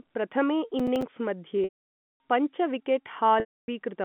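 From 0.80 to 1.02 s a burst of gritty crackle tears across the speech, a quick string of tiny dropouts with hard edges. This is processor overload crackle: the processor fell behind and missed a handful of deadlines for very short audio buffers, on the order of 5 ms each. Every missed buffer was filled with silence, and the abrupt cuts in and out of each gap produce the crackle until the load eases.

At 1.64 s the speech stretches into a held, buzzy tone that fades away to silence, and normal speech cross-fades back in at 2.20 s. The same thing happens between 3.40 and 3.68 s. These are packet loss with pitch repetition. The receiver lost about 560 ms and then 280 ms of audio, which fits runs of 20 ms packets. To fill each gap it repeated the last pitch period and faded it out over about 50 ms. Both gaps outlast that fade, so each one sinks into silence before the signal resumes. Throughout the clip, the G.711 A-law telephone coding keeps the sound within the 150 Hz to 3.5 kHz line band.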